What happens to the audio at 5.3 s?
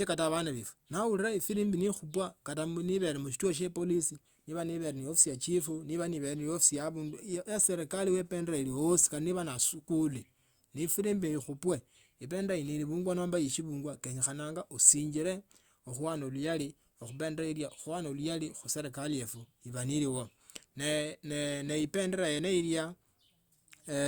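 Nothing goes wrong at 5.3 s; the speech runs on intact through that moment, with no dropout, click, glitch or other fault.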